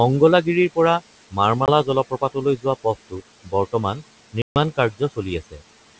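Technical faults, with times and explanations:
Throughout: noise suppressor artifacts. Steady noise is pulled down by about 18 dB between phrases and rises under them, leaving fluttery residue that shows as blotchy, flickering speckle on a spectrogram.
1.66–1.70 s and 4.42–4.57 s: packet loss on an ADPCM call. Holes of 20 ms and 140 ms (about one packet, then about seven) drop to flat silence with hard edges. The decoder's predictor then restarts out of step, so the speech returns slightly distorted after each hole before settling.
2.57–2.66 s, 2.84–3.21 s, 3.44–3.53 s and 5.51–5.62 s: speech cut by the noise suppressor. Quiet speech was treated as noise and dipped by about 13 to 19 dB, so it sounds swallowed. The waveform shows sudden envelope notches, and the spectrogram shows faded harmonics.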